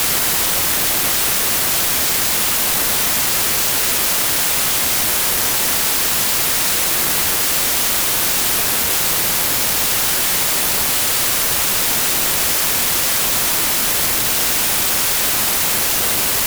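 Everyday sounds suffer a wrong sample width throughout: the data were apparently written at one width and read at a narrower one, which fits 32-bit samples read as packed 24-bit. Mismatched bytes produce loud noise over buried sound, playing at 0.75 times speed and correspondingly lower in pitch.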